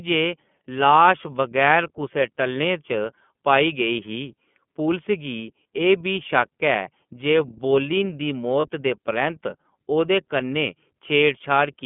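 iLBC codec coding runs throughout, from the first second: the speech is squeezed into a narrow telephone band of roughly 150 Hz to 3.4 kHz, and each block of excitation is coded on its own, leaving a plainly audible rough, synthetic edge that fits iLBC's 30 ms mode at 13.33 kbps.

Lost iLBC frames cause a brief gap from 8.61 to 8.66 s. The decoder fills the gap by repeating the last pitch cycle with added noise, so a short held, faintly buzzy vowel replaces the speech. This fits one missing 30 ms frame, and the voice is right again almost at once afterwards.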